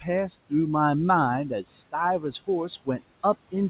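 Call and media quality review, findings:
Noise suppressor artifacts, throughout: background drops about 17 dB between phrases and rises again under speech. Suppressor attenuating noise-classified bands frame by frame. Spectrogram shows a patchy, speckled floor in the gaps; waveform shows near-silent pauses. Room noise sits about 18 dB below speech, and the spectrogram stops at 4 kHz, fitting a G.711 call path.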